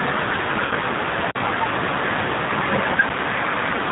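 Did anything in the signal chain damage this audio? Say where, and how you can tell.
Yes, at three stages: the codec, the network path and the output buffer.

The whole clip passes through the G.729 codec at 8 kbit/s, and its damage is plainly audible. The speech sounds rough and slightly synthetic because each 10 ms frame is rebuilt from a filter, a pitch predictor and a few pulses instead of the original waveform. On a spectrogram there is a hard ceiling at 4 kHz with nothing above it, and the harmonics below look grainy and simplified.

Between 0.65 and 0.74 s there is VoIP packet loss concealed by the speech codec. About 60 ms is missing, which fits two lost packets. The decoder fills the gap by extrapolating from its last pitch and filter at falling gain, so the sound is stretched and fades. Because each frame depends on the previous one, the sound stays weak after 0.74 s. A spectrogram shows the sound smearing and dimming away.

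At 1.31 to 1.35 s there is an underrun with held sample at the playback buffer. For 40 ms the converter holds its last value, so on the waveform the trace goes dead flat, and the sound simply stops. About 40 ms of live audio was lost during the hold, so playback resumes at a different point from where it stopped. The spectrogram shows a blank band.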